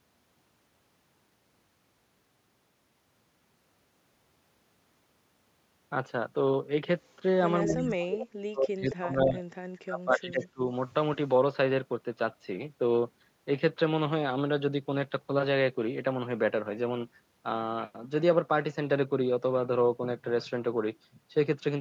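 At 7.05 to 7.15 s a very faint delayed copy of the speech appears, trailing the original by about 0.22 s. This is an echo leak, likely from a loudspeaker on the far end whose echo canceller let part of the returning signal through. It recurs at 7.69 to 7.84 s (about 10 dB below the speech), 8.11 to 8.24 s (strongest, only about 5 dB down), 8.88 to 8.95 s and 10.43 to 10.47 s, always at the same delay of about 0.22 s. That fixed lag is what marks it as echo and not reverberation.

Overlapping these, from 7.68 to 9.39 s and again from 9.84 to 10.62 s, the talker's speech sinks sharply and breaks up. The first stretch loses very deeply, the second somewhat less, for about one and a half seconds and 0.7 s in total. This is speech suppressed in double talk, likely where the canceller could not separate the talker from the echo while both were active and turned everything down. Unlike the echo leak, which adds a second copy, this takes the talker's own sound away.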